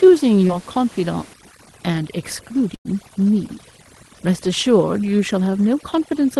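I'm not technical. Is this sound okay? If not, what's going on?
No. At 0.47 to 0.51 s there is short concealed packet loss: a fiftieth of a second of the call arrived late, and the receiver patched it, leaving a brief smear.

From 1.34 s to the end, overdone noise removal strips away the room noise too aggressively, leaving near-silent gaps with twinkles.

At 2.75 to 2.87 s a burst of packet loss drops about a tenth of a second. The receiver stretches the last sound into a fading buzz or hiss, then jumps ahead.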